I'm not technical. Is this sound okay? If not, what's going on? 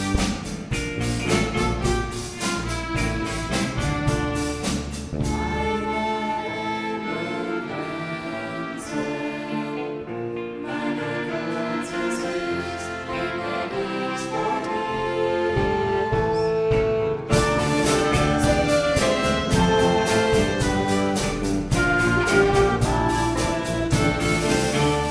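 Yes, the sound is technically okay, with no dropouts, glitches, distortion or other faults anywhere in the recording.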